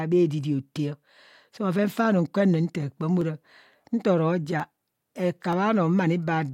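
At 3.21 s a single sharp click cuts through the speech. Two more follow, at 4.60 s and 5.53 s. Each is brief and isolated, with nothing audibly missing around it. The likely cause is dropped samples. A fraction of a millisecond of the stream goes missing each time. The waveform jumps straight from one value to a later one. That sudden step is what produces the click. Each one shows as a thin vertical line across the spectrum.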